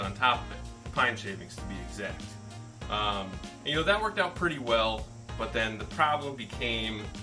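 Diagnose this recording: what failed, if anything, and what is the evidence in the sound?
Nothing seems to have gone wrong anywhere along the chain here, so there's no failed stage to point to and no fault to diagnose.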